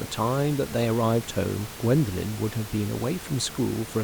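No technical faults can be heard in the speech recording, and the only steady background is the room's own ambient noise, sitting about 14 dB below the speech as part of the original recording.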